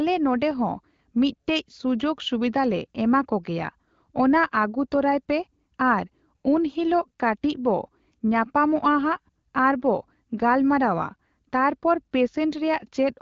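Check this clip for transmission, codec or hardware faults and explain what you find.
No transmission, codec or hardware faults can be heard in this speech. It has been carried through AMR wideband (HD Voice) coding at 12.65 kbit/s, which leaves only light coding traces and keeps the band up to about 7 kHz.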